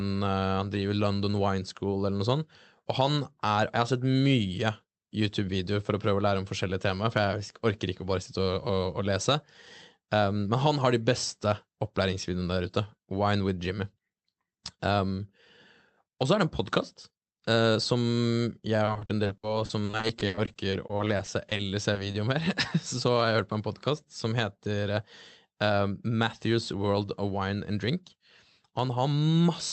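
From 18.85 to 22.15 s the speech breaks up with repeated packet loss, giving a robotic sound. Audio keeps going missing in short holes, the longest around 60 ms, and each one gets patched by stretching the last bit of sound. About a fifth of that stretch ends up concealed, so it comes out choppy.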